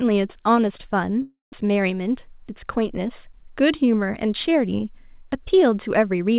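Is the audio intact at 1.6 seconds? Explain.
No. From 1.22 to 1.60 s, a long network dropout is the likely cause: about 300 ms of audio never arrived, and the receiver filled the gap by stretching the last sound into a fading buzz or hiss that sinks into silence before the speech resumes with that portion lost.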